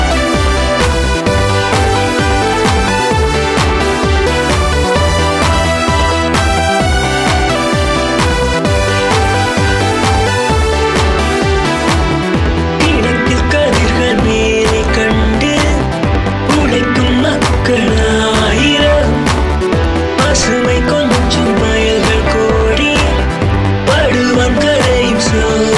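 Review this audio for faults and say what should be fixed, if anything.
From 17.15 s to the end, a resampler restarted on every block produces a steady 20 Hz tick train. Each 50 ms block was converted from 48 kHz to 24 kHz in isolation, so the filter lacked real neighbouring samples at every edge. Unlike mains hum, the ticks disappear when the sound stops, and unlike dropouts they are perfectly periodic with no gaps. To prevent it, keep the resampler's filter state running continuously across blocks.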